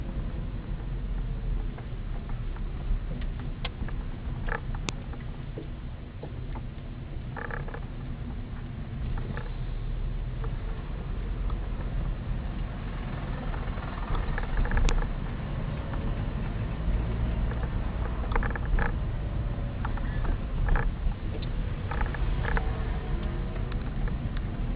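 File header played as audio: sharp, loud clicks at 4.89 s and 14.89 s, exactly 10 s apart. Separate WAV pieces of about 10 s were joined without stripping their headers, so a few dozen header bytes play as samples and snap through regardless of the surrounding sound.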